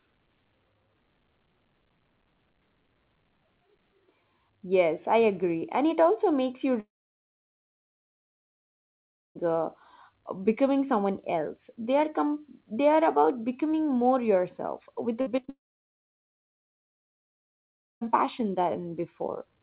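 Speech, band-limited to 4 kHz by a G.711 call codec. After "it also makes you", the sound trails off into silence from 6.8 to 9.37 s. The likely cause is a long network dropout. About 2.5 s never plays. From 15.21 to 15.49 s, after "becoming more yourself with", repeated packet loss makes the sound choppy and robotic. Four short gaps, the longest 50 ms, are patched by stretching the last sound. What is likely a second long network dropout follows, running from 15.49 to 18.03 s. The audio then resumes with that stretch missing.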